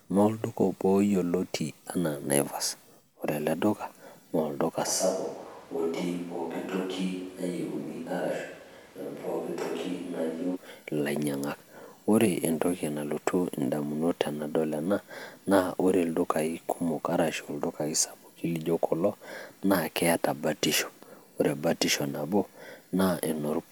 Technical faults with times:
4.88-10.54 switch to a distant microphone

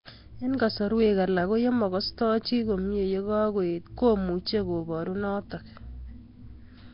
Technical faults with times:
0.00-6.93 Nellymoser compression

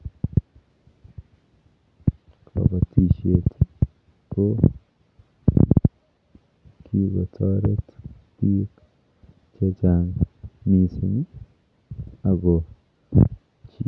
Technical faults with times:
none

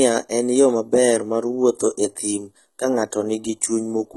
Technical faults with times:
0.00-4.17 HE-AAC compression

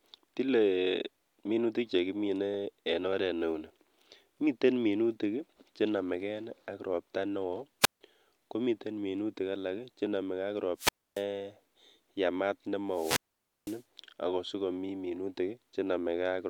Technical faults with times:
7.81-8.01 wireless microphone squelch dropout
10.76-11.24 wireless microphone squelch dropout
12.90-13.84 wireless microphone squelch dropout

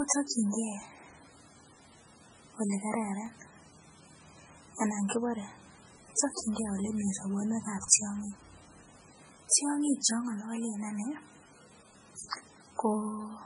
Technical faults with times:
0.00-13.46 MP3 compression
3.26 overlapping chunks
9.27 overlapping chunks

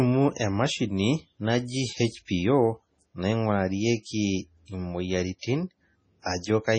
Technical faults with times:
0.00-6.79 MP3 compression

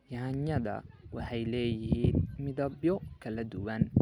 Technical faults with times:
none

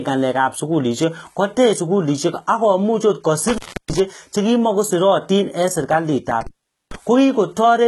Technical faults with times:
0.00-7.87 HE-AAC compression
3.48-3.99 intermittent contact
6.41-6.96 intermittent contact

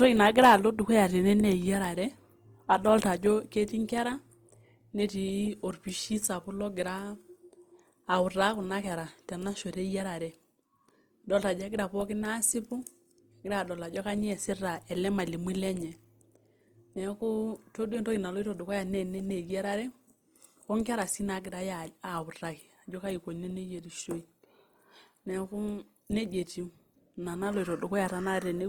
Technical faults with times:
0.00-28.68 Opus compression

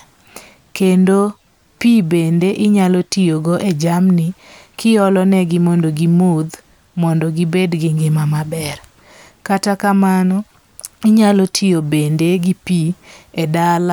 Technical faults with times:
none

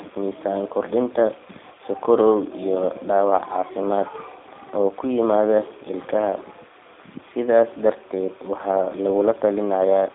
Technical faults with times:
0.00-10.14 G.729 codec

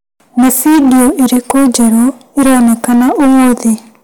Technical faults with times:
0.00-4.04 hard clipping

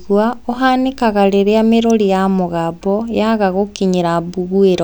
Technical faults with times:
1.90 electrical switching spike

